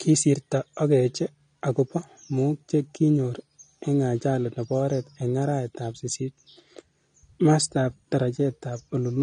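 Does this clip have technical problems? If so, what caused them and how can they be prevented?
Yes. Throughout the speech, nothing sounds above 9.7 kHz, and sibilants carry a fizzy, warbling smear. This is likely AAC compression at a low bitrate, consistent with about 32 kbps. A plain low-pass filter would sound dull but clean, whereas the gaps and swirling texture inside the remaining band point to the codec. Prevent it by encoding at a higher bitrate or keeping a lossless master.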